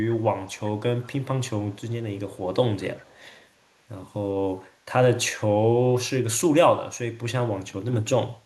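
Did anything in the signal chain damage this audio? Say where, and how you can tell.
Yes: echo leak, likely from call processing, with faint delayed copies (about 30–35 dB down, 383 ms late) at 0.47–0.6, 1.02–1.07, 1.7–1.92, 2.35–2.39 and 2.96–3.46 s, where the echo canceller let residue through.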